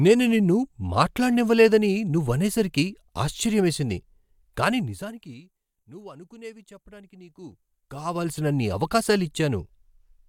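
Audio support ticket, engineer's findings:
Zipper noise, 7.25 to 8.45 s, right after "నువ్వు అనుకునేవి చెప్పటానికి". Ticking rides on the speech while the level moves around 20 dB in 2 dB steps, about ten a second. Probable cause: an unsmoothed gain stage updated per block. Waveform shows a staircase envelope, and the spectrogram shows thin vertical broadband lines at each step.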